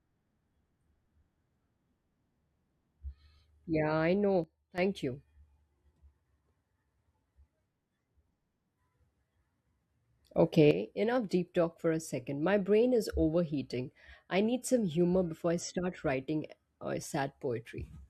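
At 4.44 s the level drops by about 13 dB, then at 10.35 s rises by about 9 dB, each a sudden gain jump likely from a gain change applied without a ramp. Background noise steps with the speech instantly, unlike a compressor's gradual pumping.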